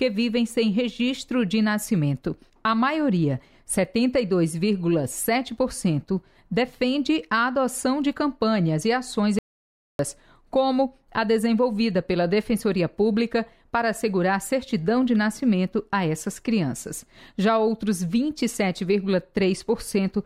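The audio has one audio dropout to silence. At 9.39 s the sound cuts out abruptly. It returns at 9.99 s. The gap lasts about 0.6 s and is silent, with no room tone. The input was likely lost briefly while recording continued.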